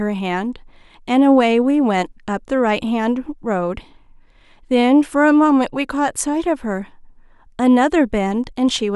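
Speech recording with no technical faults audible anywhere in the clip.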